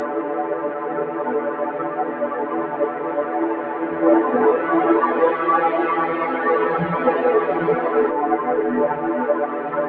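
Throughout the clip, a noise suppressor applied to music or sounds is acting on the signal. The suppressor, tuned for speech, treats sustained tones, ambience and decaying tails as noise and pulls them down, while onsets pass largely intact. The gain reduction swings by roughly 5 dB, so held material sinks after each attack and recovers unevenly, giving a pumping, thinned sound. The band stops at about 8 kHz, as expected from call microphone processing.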